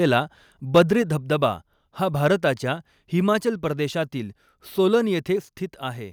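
Speech, with a brief harsh, crackling burst from 0.75 to 0.82 s, just before "धबधबा हा", where peaks run about 3 dB past the converter's limit, likely microphone overload. The waveform shows flattened tops on a small share of samples, and the spectrogram shows a broadband smear of distortion.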